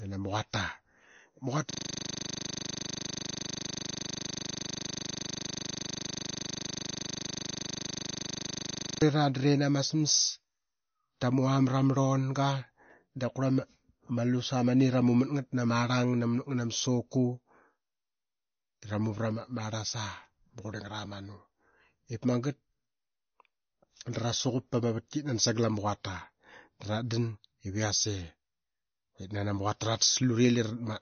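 Throughout the speech, the sound is watery and swirly, with chirpy sibilants and smeared attacks, and nothing is present above 6.5 kHz. This is likely MP3 compression at a low bitrate near 32 kbps. On a spectrogram, the top is cut flat, with speckled holes flickering below it.

From 1.71 to 9.02 s, a system hang loop replays a single 40 ms slice about 180 times as the frozen system's audio buffer cycles. It sounds like a steady 25 Hz buzz, and the waveform shows an identical repeating block with even vertical stripes.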